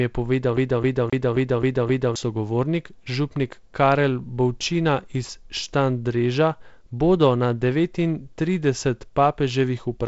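From 0.57 to 2.16 s the speech sticks like a CD stuck on one turn: one 264 ms fragment repeats six times, with brief mutes at each jump.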